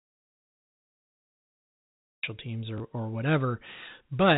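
From the very start until 2.23 s the clip is an audio dropout to silence, already under way when the audio begins. The waveform is a flat line and the spectrogram is blank, with no room tone, most likely because the input was lost while recording continued.

At 2.78 to 2.80 s there is packet loss with the last packet repeated: a 20 ms stretch, consistent with a single lost packet, was filled by replaying the previous one. It produces a small blip. On the waveform it appears as a duplicated cycle pattern, and on the spectrogram as a brief repeated slice within the telephone band, which stops at 4 kHz.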